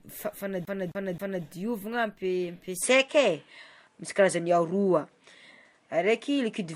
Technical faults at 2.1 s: transcoding between lossy codecs

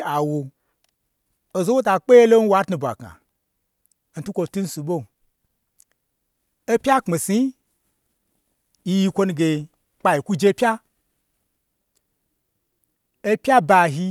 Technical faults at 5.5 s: none

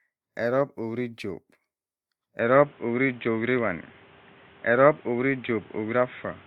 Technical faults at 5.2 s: input switched to a poorer device

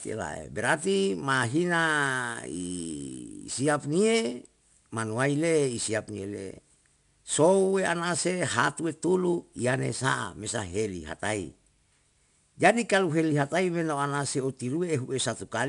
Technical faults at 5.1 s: 4-bit ADPCM compression

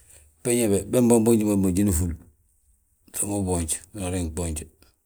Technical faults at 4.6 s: none

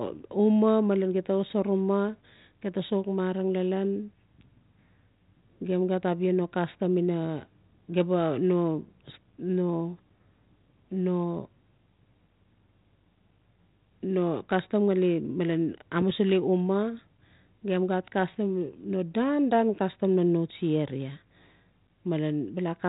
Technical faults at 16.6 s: none

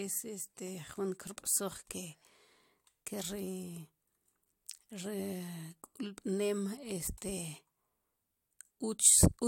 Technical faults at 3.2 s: none

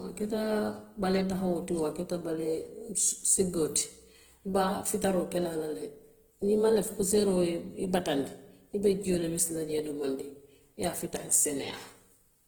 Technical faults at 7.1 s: Opus compression

